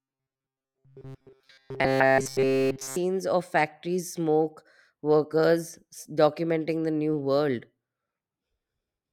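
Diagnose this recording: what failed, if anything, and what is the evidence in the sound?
From 0.01 to 2.96 s the speech is a rigid, metallic buzz pitched at 133 Hz, the words only loosely traceable, clearing just before "of factories smoke workers". This is robotic sound from repeated short buffers, likely a driver or buffer underrun replaying a roughly 7.5 ms block while the real audio is skipped.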